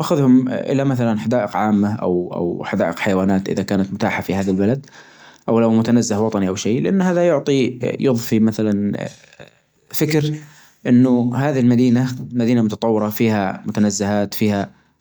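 Listening closely to the speech, nothing stood out as a technical problem at any point.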